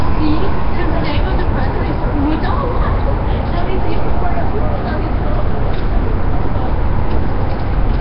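A recording of everyday sounds that, from start to finish, carries heavy codec damage, with nothing above 5.3 kHz. This is likely Nellymoser compression. Its coarse fixed-bit blocks leave weak bands empty and fill them with noise, and the heavy damage fits a bitrate around 22 kbps.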